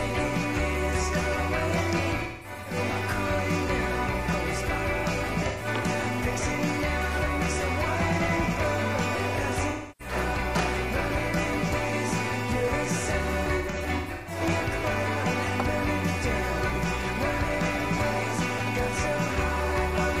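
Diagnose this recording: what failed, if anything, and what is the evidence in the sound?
Throughout the recording the sound carries a grainy distortion that moves with the signal, roughly 25 dB below it, and quiet passages turn gritty rather than hissy. The cause is likely a sample-format conversion: low bit depth without dither, with truncation that fits a 6-bit word. Unlike dithered noise, this error vanishes in silence and tracks the sound.

Codec-stage AAC frame loss with concealment appears at 2.23–2.76 s, 5.47–5.67 s, 9.69–10.15 s and 13.58–14.41 s. Each loss is a smeared, phasey patch rather than a hard gap. The decoder refills the missing frames from the last good spectrum instead of muting or clicking as a buffer underrun would. The first and last episodes are broken up, spread over about 430 ms and 680 ms, with runs of up to roughly 200 ms.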